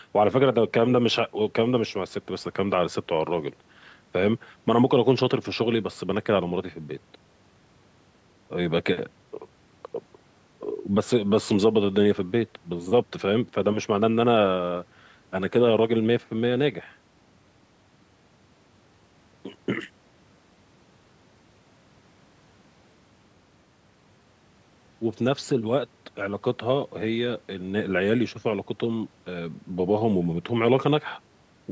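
Listening to this speech recording, which has passed through a call's microphone processing, nothing stood out as a technical problem.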